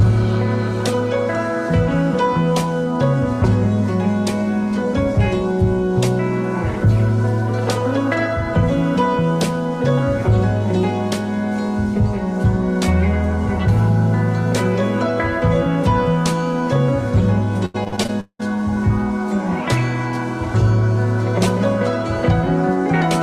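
The audio has repeated packet loss (robotic sound) from 17.65 to 18.57 s. Repeated dropouts, with around eight heard, are each bridged by extending the preceding sound. The longest bridge runs about 190 ms, so roughly half the stretch is patched and the rest choppy.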